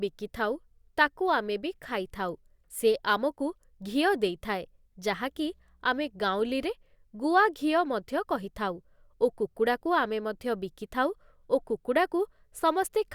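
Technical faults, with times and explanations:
5.12 to 6.72 s, mains hum: A steady low tone at 60 Hz appears under the speech for about 1.6 seconds, then stops. It sits roughly 35 dB below the speech, a low drone. Power-line current is leaking into the signal path, most plausibly through a ground loop or a nearby transformer. Because it follows the supply frequency, the pitch stays fixed and does not move with the talker.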